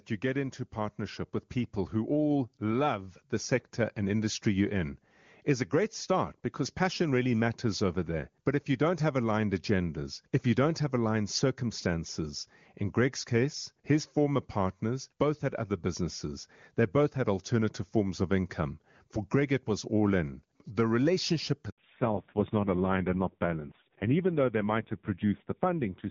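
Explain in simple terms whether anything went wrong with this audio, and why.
Handover gap, 21.70 to 21.78 s: right after "all in the relationship", the phone switched networks and no speech arrived for 80 ms, so that moment is simply lost.

Fallback to narrowband, from 21.78 s to the end: the call dropped from the clear HD Voice codec used earlier to an older narrowband one. Nothing above 4 kHz gets through, so the speech sounds duller and rougher.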